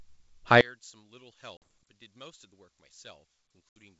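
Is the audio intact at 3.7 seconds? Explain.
No. Two things are going on around 3.7 s. From about 0.61 s to the end, the level drops by about 26 dB. That's most likely one channel inverted: one side of the stereo pair has flipped polarity, so when the two are summed to mono the shared centre content, including the speech and its low end, cancels, and only the small difference between the channels survives.

On top of that, packet loss on an ADPCM call hits from 3.72 to 3.78 s. You get a hard-edged gap of silence, roughly 70 ms worth, which points to a handful of consecutive packets going missing. Because the decoder's adaptive predictor and step size lose track of the sender's during the hole, the speech comes back with a bit of grit before settling over the next few tens of milliseconds.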